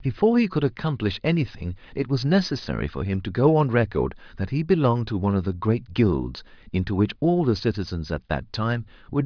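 No technical faults can be heard anywhere in this recording of speech.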